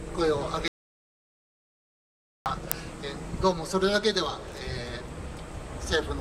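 An audio dropout to silence runs from 0.68 to 2.46 s: about 1.78 s of sound vanishes into silence, most likely from the input briefly disconnecting or muting. An uninitialised buffer at 2.72 s produces a sharp crack lasting roughly 0.73 ms, which fits a 32-sample block of stale memory being played as audio.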